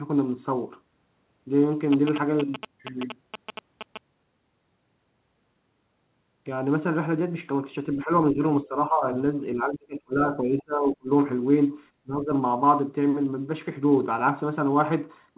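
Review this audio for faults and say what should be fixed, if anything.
GSM signalling bursts: a 2G phone near the equipment was signalling, and the audio circuit rectified its radio bursts. From 1.93 to 3.98 s, this puts a galloping tick pattern with a 217 Hz buzz over the speech, only a little quieter than the voice. Keeping phones away from the microphone and cabling, or using shielded, RF-filtered inputs, prevents it.

Speech suppressed in double talk: while both sides were talking, the echo canceller likely could not tell this talker from the far side's loudspeaker echo, so it turned both down. The speech dips at 7.96 to 8.11, 8.33 to 8.43, 8.64 to 9.06, 9.54 to 11.10 and 12.03 to 12.30 s. The shortest dips are around 10 dB, and in the longest stretch the speech nearly vanishes. Better-tuned echo cancellation with reliable double-talk detection, or a headset on this side, prevents it.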